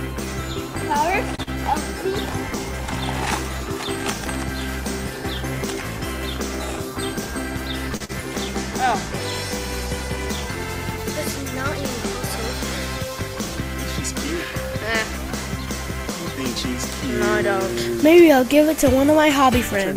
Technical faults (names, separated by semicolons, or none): short stall from a late packet; short concealed packet loss; jitter buffer speed-up